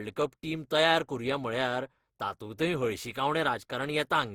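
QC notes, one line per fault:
Throughout, generation loss. The speech sounds swirly, smeared and hollow, and consonant attacks blur. This is likely repeated lossy coding, about seven passes, which fits Opus at 64 kbit/s. Each pass requantises on a shifted frame grid, so noise and spectral holes build up.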